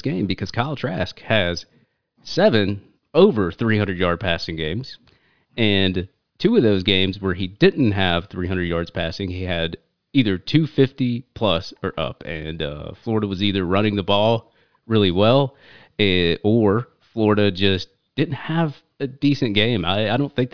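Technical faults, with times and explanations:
No technical faults can be heard anywhere in the speech recording. Nothing in the sound calls for a time or an explanation.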